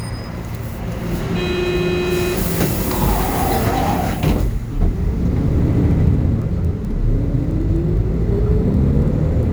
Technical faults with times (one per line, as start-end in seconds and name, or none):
0.00-9.52 crude rate conversion